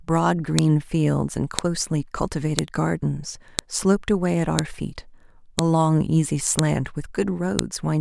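A sharp, loud click cuts through the speech at 0.59, 1.59, 2.59, 3.59, 4.59, 5.59, 6.59 and 7.59 s, one every 1.0 s. This is a file header played as audio: the stream was assembled from one-second WAV pieces joined without stripping their headers, so each piece's few dozen header bytes are decoded as samples. The result is a brief, loud snap at every join, regardless of what the speech is doing at that moment.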